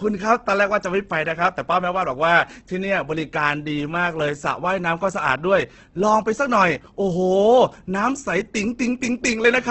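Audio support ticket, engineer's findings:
Speech grainy and rough throughout, nothing above 8.2 kHz. Likely Opus compression in CELT mode, noise-filling starved bands, which fits a heavily squeezed 12 kbps wideband encode.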